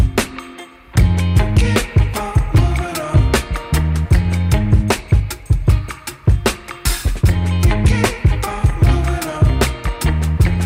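From start to finish, the loudest moments carry a gritty crackle, a brief rasp riding on each peak rather than a constant fuzz. This is hard clipping: the signal was driven about 5 dB beyond what a stage in the chain could pass, so its peaks were sliced flat. Only a small fraction of the samples, around 2 percent, hit that ceiling, but each flattened top throws off high harmonics, which is where the crackle comes from.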